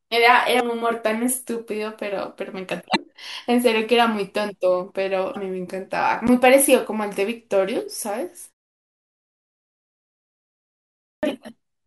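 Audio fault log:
0.56–0.61 s, 2.92–2.96 s and 5.32–5.36 s: damaged data in a compressed stream. Each of these is a quick glitch of roughly 45 ms, the kind you get when a stretch of the encoded bitstream arrives corrupted. The decoder chokes on those frames, loses its footing, and has to hunt for the next valid frame header before it can carry on.
6.27 s: block of digital silence. It's a single tick, because for about 11.6 ms the output is digital silence and then the signal is back. The 512-sample length fits a 512-sample buffer that didn't get filled in time, so the playback path just emitted nothing for one block. There's no fade on either side, and at this size it comes out as a click.
11.07–11.23 s: clipped start after a pause. The speech comes back after a roughly 2.6 s gap, but it begins abruptly with its opening missing. About 160 ms is swallowed while the output device wakes up or relocks after idling through the silence. 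The damage is all in that late restart, where the first sounds are lost and the line jumps in already underway.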